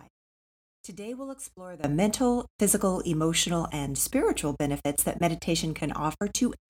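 At 1.84 s, just after "we'll explore", the digital gain was most likely changed in a single step with no ramp, a sudden gain jump of about 19 dB. From that point to the end of the speech, the voice and the background noise both become abruptly and much louder together. The level stays raised and never settles back. The instant shift in level between one sample and the next can be heard as a sharp edge.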